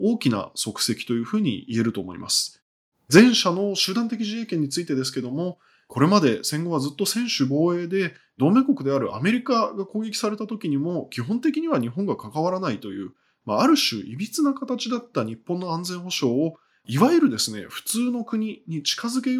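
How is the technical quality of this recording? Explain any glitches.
The recording has two brief glitches close together, about three seconds in.

From 3.16 to 3.22 s, a loud syllable turns harsh and crackly. This is microphone overload, likely from input gain pushing peaks about 4 dB past the converter's limit, flattening roughly 7 percent of samples.

At 3.19 s, the speech and background drop abruptly by about 2 dB. This is the microphone volume stepped down, likely by the call software reacting to that distorted peak.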